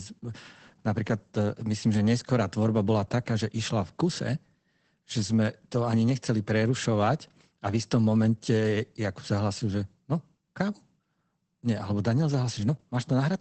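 Throughout the speech, Opus voice compression is plainly audible. The coder's linear-prediction mode has narrowed the band to wideband, so a spectrogram shows energy stopping sharply at 8 kHz. The narrowed band and coarse excitation coding make the sound muffled, hoarse and slightly robotic, which fits a bitrate near 12 kbps.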